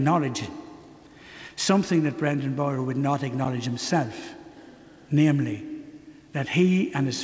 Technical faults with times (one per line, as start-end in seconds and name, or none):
none